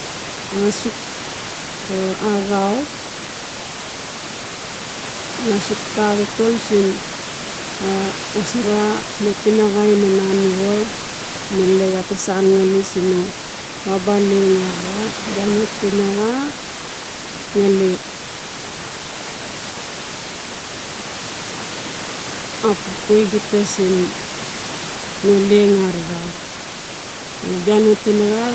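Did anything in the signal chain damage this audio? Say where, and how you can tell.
No, nothing in the signal chain damaged this audio.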